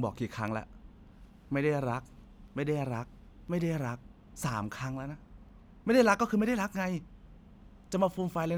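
A speech recording with periodic USB or driver dropouts: from 0.48 s to 8.49 s, roughly once per second, a tiny sliver of audio, well under a millisecond, is replaced by silence. The gaps are heard as regular ticks wherever they fall on the speech, consistent with a background process stalling the audio driver at a fixed interval.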